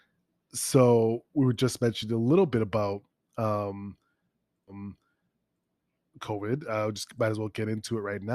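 A stream segment repeated from 4.67 to 5.67 s, where one second of the speech plays a second time. The player fetched or queued the same chunk of the stream twice, so after reaching the end of that segment it jumps back and plays it again before moving on, adding a full second to the running time. The jump back is marked by a small blip, and the speech on either side of it is heard twice.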